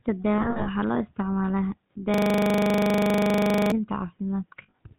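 Speech with a buzzy, gravelly roughness over every syllable and nothing above 4 kHz, the muffled, grainy quality of the GSM full-rate codec. That sound points to the 13 kbps first-generation GSM coder, which models the vocal tract and drives it with a sparse, regularly spaced pulse excitation. That coarse excitation causes the plainly audible rasp, and the coder's bandwidth limit removes the upper treble. From 0.38 to 0.69 s the sound keeps catching on a rough, metallic ring. The dropouts are scattered, adding up to about 160 ms over 280 ms, and the longest continuous hold is roughly 70 ms. The same ringing returns from 4.62 to 4.79 s, about 120 ms spread over 160 ms. These are lost GSM frames: the decoder replaces each bad frame by repeating the parameters of the last good one, so the sound smears into that metallic hold. From 2.14 to 3.72 s, one 40 ms fragment repeats identically about 39 times, producing a steady 25 Hz buzz-stutter in place of the speech. 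This is a system hang loop: the computer or its audio driver stalled while the sound hardware kept replaying the same short section of its ring buffer, and the loop length fits a 40 ms buffer.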